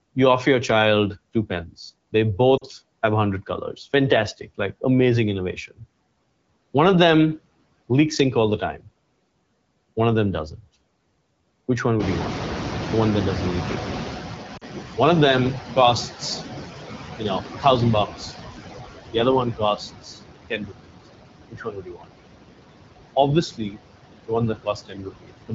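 Throughout the clip the noise suppressor leaves artifacts. It pulls the steady background down by about 20 dB, so the remaining noise sinks between phrases and swells under the speech. Unlike codec roughness, this effect follows the level of the talking.

At 2.57 to 2.64 s, just before "have a", and again at 14.57 to 14.64 s, lost AMR speech frames cause a short dip to near silence of about 40 ms, which fits two dropped 20 ms frames. The decoder repeats the last good sound as it fades, so each sounds like a brief fade-out, not a clean click or gap.

When the room noise rises by about 21 dB near 12 s, the noise suppressor catching up is heard from 11.99 to 16.11 s. The louder noise first comes through with less reduction and then gradually sinks by about 13 dB over about 4 s. It is a slow glide, not a sudden switch.

Speech cut by the noise suppressor occurs at 17.16 to 18.33 s (drops up to about 15 dB), 19.11 to 20.98 s, 21.51 to 22.12 s and 23.16 to 25.54 s (up to about 22 dB). 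Soft endings and quiet stretches are swallowed along with the background. Unlike frame loss, these dips do not smear the sound.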